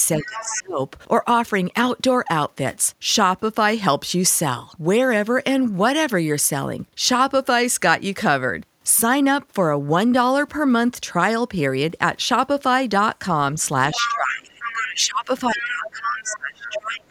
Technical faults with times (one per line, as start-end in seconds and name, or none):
0.18-0.80 speech suppressed in double talk
0.22-0.60 other side's voice leaking through
13.92-14.16 other side's voice leaking through
13.94-17.11 speech suppressed in double talk
14.48-14.88 other side's voice leaking through
15.61-15.90 other side's voice leaking through
16.19-16.35 other side's voice leaking through